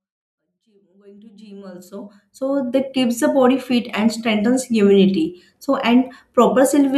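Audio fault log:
No faults turn up in this speech clip, just a gentle fade-in at the top that's fully up by about 2.8 s.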